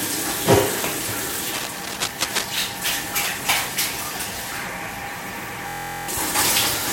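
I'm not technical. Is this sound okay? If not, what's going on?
No, there are two problems.

From 1.54 to 2.45 s there is cable scratch noise. A loud scratching, rustling burst sits over the sound. This is likely a worn cable or plug being moved, so the electrical contact flickers and adds noise.

From 5.69 to 6.08 s there is a system hang loop. The computer briefly froze, but the sound hardware kept replaying one tiny 23 ms slice. It repeats 17 times, making a buzz at about 43 per second. Nearly half a second of real sound is missing.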